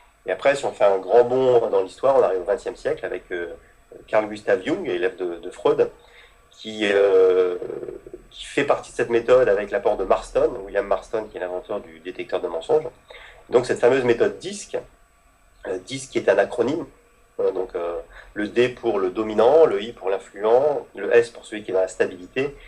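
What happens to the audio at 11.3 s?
Nothing goes wrong at 11.3 s: the audio plays through that moment intact, with no dropout, click, glitch or other fault.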